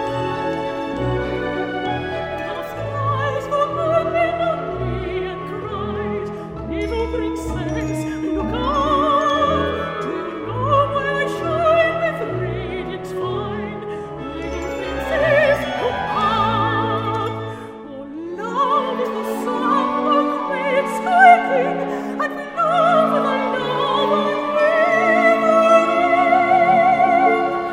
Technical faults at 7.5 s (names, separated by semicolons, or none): none